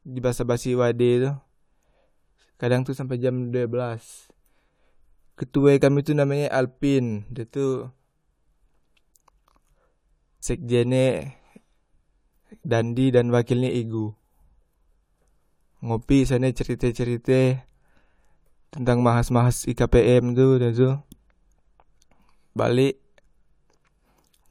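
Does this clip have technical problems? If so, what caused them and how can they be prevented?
No, no technical faults detected.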